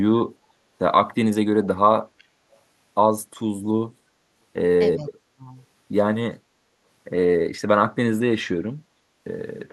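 From 2.18 to 2.24 s a brief, very faint delayed copy of the speech surfaces, roughly 35 dB below it and trailing by 370 ms: an echo leak, likely from a loudspeaker echo canceller letting residue through. On a spectrogram it appears as a pale, shifted ghost of earlier harmonics.

Between 4.95 and 5.5 s the speech is suppressed in double talk, likely because the canceller misread simultaneous talking as echo and ducked it. For about half a second the sound sinks by some 25 dB, showing as a sharp notch in the waveform envelope.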